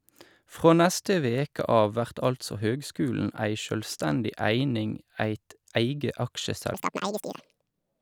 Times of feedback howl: none

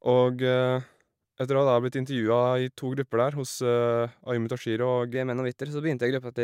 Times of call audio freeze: none

